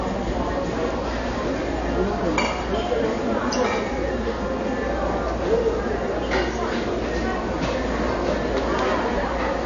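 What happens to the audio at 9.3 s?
At 9.3 s the sound is dull and smeared, with nothing above 7.1 kHz. As throughout the clip, this is likely AAC compression at a low bitrate, around 32 kbps.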